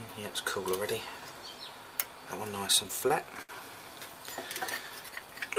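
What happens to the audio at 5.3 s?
Nothing goes wrong at 5.3 s; the audio plays through that moment intact, with no dropout, click or other fault.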